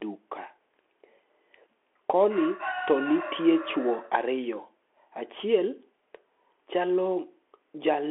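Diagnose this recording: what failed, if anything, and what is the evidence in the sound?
The failure is at the codec stage: the whole clip has gone through a Bluetooth CVSD headset codec. The band stops dead, with nothing above 3.7 kHz and the voice squeezed into roughly 300 Hz to 3.4 kHz. The damage is plainly audible: scratchy s sounds, a grainy hiss under the speech, and harsh edges where loud bright sounds outrun the step size. That's a one-bit-per-sample coder guessing up or down, which fits a 64 kbps link.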